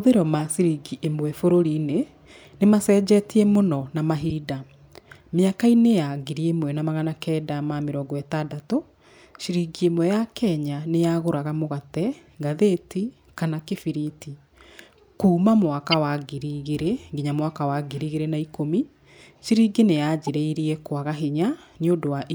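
At 0.39–0.42 s, 4.29–4.32 s, 15.91–15.94 s and 20.27–20.37 s the speech carries brief chirps and noise bursts, a corrupt frame decoded each time. Flipped bits in compressed frames were decoded anyway, misplacing spectral energy for one to a few frames. The 15.9 s burst is loudest.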